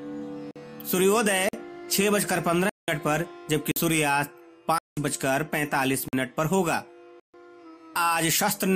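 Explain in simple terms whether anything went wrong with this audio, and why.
Something did go wrong: the audio has seven dropouts, each a block of digital silence where the sound cuts out and back with no fade. The short ones, about 46 ms, land at 0.51, 1.49, 3.72 and 6.08 s. Longer holes sit at 2.69 s and 4.78 s (about 186 ms each) and 7.20 s (about 139 ms). The short gaps fit a 2048-sample buffer that wasn't filled in time.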